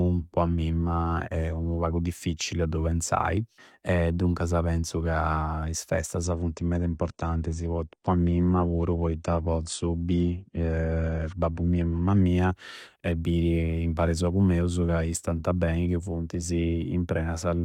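At 6.2 s, just after "duncasa penzu ca is", the speech switches abruptly to an adaptive stream at a lower bitrate. The connection slowed, so the player fetched a cheaper encoding. Nothing remains above 9.7 kHz. The treble thins, and coding artefacts grow. There is no gap at the switch. The degradation fits a drop from roughly 96 to 32 kbit/s AAC. Full quality returns at 12.2 s, six seconds later.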